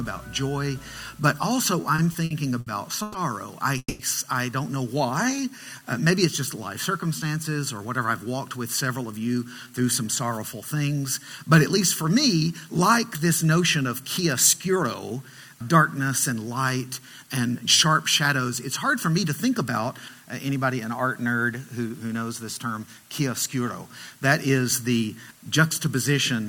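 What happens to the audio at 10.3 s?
At 10.3 s the audio is inside a jitter buffer speed-up running from 7.78 to 10.63 s. The receiver drains excess buffered delay by cutting short pitch-period pieces repeatedly, about a fifth of a second in total, so the sound plays at 107% speed without a pitch change and feels hurried. On a spectrogram, harmonics stay level while events sit closer together; the waveform shows whole pitch cycles dropped, with no gaps.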